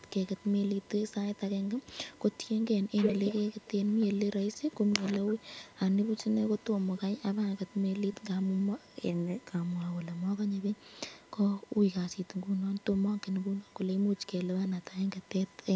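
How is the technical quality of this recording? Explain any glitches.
The recording has two technical faults. A steady tone runs under the whole clip, and a delayed copy of the speech returns several times in its first 11 seconds.

USB whine is present throughout. It is a fixed 1 kHz tone, about 35 dB below the speech. The USB bus draws current in 1 ms frames. That pulsing leaks into the audio path through shared power or ground. A 1 ms repeat produces exactly this 1 kHz pitch. It sounds like a thin, constant whistle behind the speech. It is clearest in pauses.

An echo leak comes and goes. It occurs at 0 to 2.38 s, 3.03 to 4.59 s, 5.28 to 5.68 s, 6.6 to 7.02 s, 8.13 to 8.25 s, 8.8 to 10.21 s and 10.76 to 11.31 s. Each time, the speech repeats 325 ms late. The cause is likely a far-end loudspeaker whose sound reached its microphone without being fully cancelled. Most returns are faint, about 20 to 35 dB down. 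At 3.03 to 4.59 s the echo is about as loud as the speech itself, a clear doubling.

The call microphone processing leaves nothing above 8 kHz. That limit is expected.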